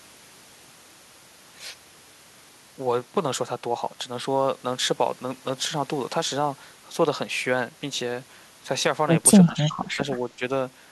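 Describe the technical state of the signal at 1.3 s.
At 1.3 s the speech signal is intact, with no audible fault at that moment.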